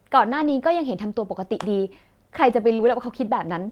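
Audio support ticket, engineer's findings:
Rough, grainy patch at 0.33–0.51 s, no gap. Lost packet rebuilt from error correction: about 100 ms decoded from low-bitrate in-band FEC copies carried in the following packets, which fits roughly five lost packets. Speech continuous but noisier.

Second rough stretch at 2.79–2.89 s. Same cause, lost packet rebuilt from error correction: 60 ms played from the coarser redundant copies, pointing to about three packets. The degradation leaves no hole.

Brief smear/wobble at 2.75–2.81 s. Short concealed packet loss: 40 ms missing at the decoder, 31 ms filled by extending the preceding speech, then cross-faded back into received audio. Overlaps the start of the FEC stretch above.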